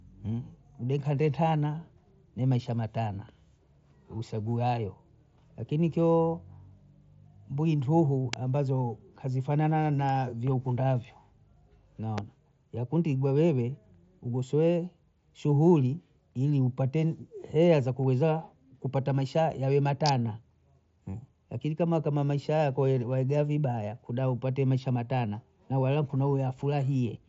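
At 8.33 s and 12.18 s sharp snaps land on the speech, then a tight click cluster at 20.06–20.09 s: electrical switching spikes, likely nearby switch arcing, added on top rather than interrupting the sound.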